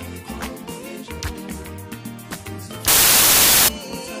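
From 2.88 to 3.68 s the audio turns into loud, harsh broadband noise, a clear case of samples built from the wrong bytes. The reader is pairing bytes wrongly, so the jittery low bits end up driving each sample's magnitude.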